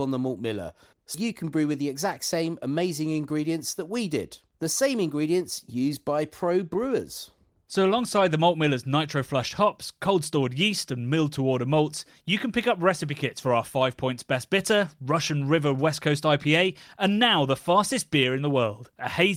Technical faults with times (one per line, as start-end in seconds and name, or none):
1.14 skip ahead
1.23-2.67 jitter buffer speed-up